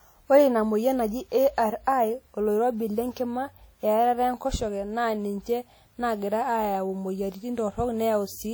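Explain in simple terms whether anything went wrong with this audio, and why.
The speech was likely squeezed with WMA compression, an older format that stores sound in fairly long chunks and discards quieter detail. From start to finish, the voice sounds plainly ringing and washy, with a hiss that swells and fades as it speaks.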